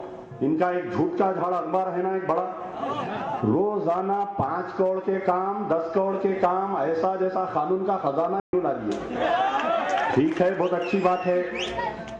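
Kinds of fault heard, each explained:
Bluetooth dropout: At about 8.40 s the sound simply cuts out and comes back at 8.53 s, a hole of roughly 130 ms. It picks up further along rather than where it stopped, as if it kept playing through the gap. The likely cause is a short run of packets on the wireless link not reaching the headphones in time, so they got discarded and the output sat silent until good data arrived.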